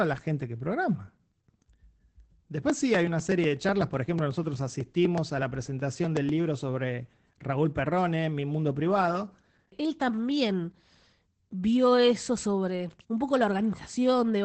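Speech, coded throughout with Opus voice compression at 12 kbps in SILK mode. Nothing is heard above about 8.5 kHz, so the top of the band is gone. The coarse coding makes the voice muffled, hoarse and a little robotic. From 2.70 s to 6.29 s there are periodic USB or driver dropouts. A tiny slice, around a millisecond, is skipped every 0.124 s. That gives about thirty evenly spaced ticks. Something blocking the bus or driver on a fixed cycle causes this.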